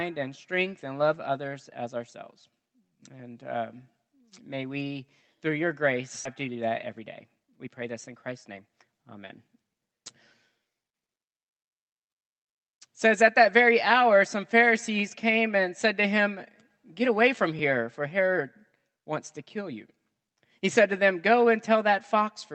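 At 6.25 to 6.27 s there's a skip ahead. A backlog had built up, so roughly a second of audio was thrown away and playback jumps straight across it. The two sides butt together with no gap, so the sound just lurches forward.

Right after, from 6.47 to 9.9 s, comes a jitter buffer speed-up. The receiver still held more audio than it wanted, so it kept snipping out tiny pitch-period slices, about half a second in total. The sound runs at 116% speed at unchanged pitch and feels noticeably rushed.

At 17.59 s there's a repeated buffer. The next chunk didn't arrive in time, so the same roughly 5 ms piece played three times back to back with hard joins. That's so short it comes across as a quick click or buzz, all riding on the Opus call path with its top end stopping around 8 kHz.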